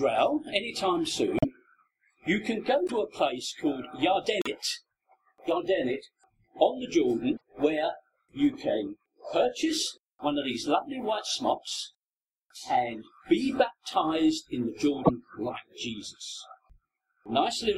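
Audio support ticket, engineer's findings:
Short skip bursts at 1.37, 2.86, 4.40, 7.36 and 15.04 s. Each lasts 56 to 72 ms, two to three 26.1 ms frames. Likely a broken MP3 bit reservoir. Frames lost, so following frames decode borrowed bits from the wrong frame.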